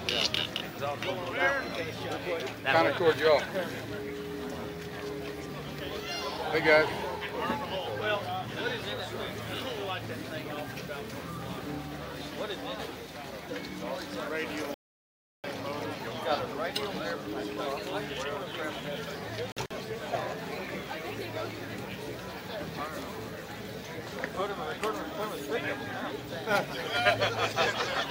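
Sound cuts to silence from 14.74 to 15.44 s, about 0.7 s lost, then again as brief gaps scattered between 19.52 and 19.71 s, the longest near 46 ms. Playback resumes further along each time, pointing to a likely Bluetooth dropout.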